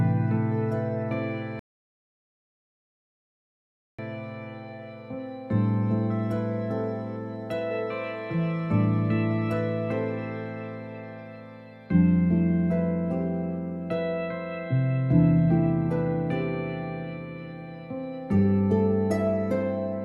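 At 1.59 s the sound cuts to silence and stays there until 3.99 s, a rebuffering stall: playback ran out of downloaded audio and waited about 2.4 s for more. Unlike a dropout, it resumes exactly where it stopped, so nothing is skipped.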